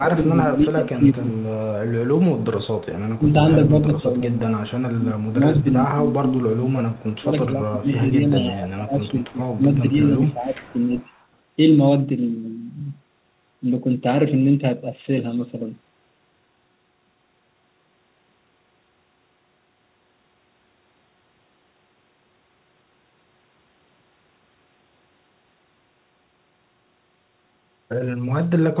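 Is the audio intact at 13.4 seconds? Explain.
Yes, the speech at 13.4 seconds is intact, with no dropout, glitch or other fault at that moment.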